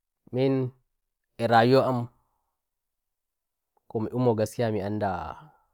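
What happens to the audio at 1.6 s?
Nothing goes wrong at 1.6 s; the speech carries on intact through that moment, with no dropout, click, glitch or other fault.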